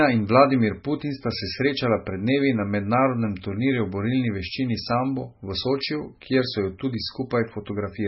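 MP3 compression damage runs through the whole clip: nothing remains above 5.6 kHz, and the speech sounds watery and swirly, with chirpy s sounds and smeared attacks. A starved encoder, likely near 16 kbps, cut the treble and zeroed weak frequency lines frame by frame.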